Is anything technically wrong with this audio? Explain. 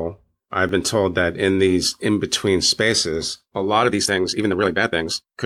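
Yes, there are two faults.

At 0.69 s, just before "been told that in", the speech jumps ahead with no gap of silence. This points to a dropped buffer (overrun): the software likely failed to collect its samples before the hardware overwrote them, so a few milliseconds were lost and the two sides were joined directly. Because nothing is muted, it is a skip rather than a dropout. A dropout would leave a hole in the sound.

From 3.80 s to the end, after "in between spaces a", there is a time-stretched section. The speech runs at about 1.8 times its normal pace, so it sounds rushed, and the change in pace is abrupt. The pitch stays where it was. That sets it apart from simply playing the audio faster, which would raise the pitch. The likely cause is software shortening this part to fit a length, dropping short pieces of audio to keep the pitch intact.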